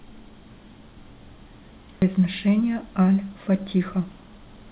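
At 2.02 to 2.04 s the speech jumps forward in a skip ahead. About 0.4 s of audio is gone. It was likely dropped in transit, or thrown out by an overfull jitter buffer while later audio was already queued. Nothing fills the gap. The two sides are spliced almost directly, so the speech lurches abruptly into later material. On the narrowband call path there is nothing above 4 kHz.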